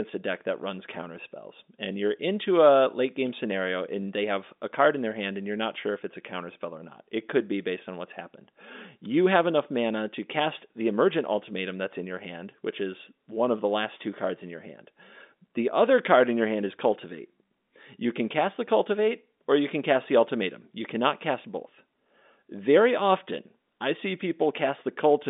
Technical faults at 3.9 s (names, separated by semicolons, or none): none